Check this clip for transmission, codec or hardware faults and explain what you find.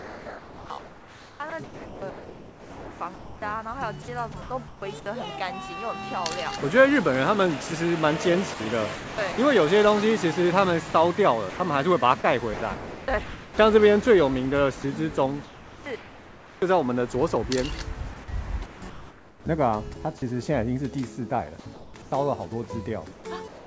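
Three kinds of voice-detector fault appear, all tied to discontinuous transmission on a call path. Nothing is heard above 8 kHz, which fits a G.722 codec at 64 kbps.

Sound chopped by the voice detector occurs at 0.0 to 5.06 s, 8.54 to 9.38 s, 10.90 to 13.58 s and 18.66 to 19.96 s. The detector likely toggled repeatedly. Pieces of sound, over 3 s in the first stretch, become synthetic noise. The result is choppy.

Comfort noise in place of the background appears at 15.44 to 16.62 s, 21.60 to 22.12 s and 23.12 to 23.66 s. The sender likely stopped transmitting during pauses. The receiver filled them with generated noise. The real background turns steady and featureless.

Sound dropped by the voice detector occurs at 21.60 s, lasting 60 ms. The detector likely misjudged a quiet sound as background and cut it. About 30 ms of sound is lost. A brief patch of comfort noise replaces it before the sound returns.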